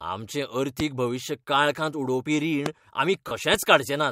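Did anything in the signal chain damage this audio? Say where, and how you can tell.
Yes. There are two loud pops in the analogue wiring stage, at 0.80–0.82 s just before "भविश्य काळखांत उडोवपी" and at 2.66–2.68 s right after it. Each is a single sharp thump about 15 dB above the speech, which carries on underneath. A voltage spike from a plug or a static discharge is the likely cause.

There are also lost LE Audio frames on the Bluetooth link, around 3.28–3.31 s. It's a 30 ms gap, which fits three dropped LC3 frames. The decoder concealed it by replaying the last spectrum with scrambled phase, so the speech briefly smears into a noisy buzz instead of going silent.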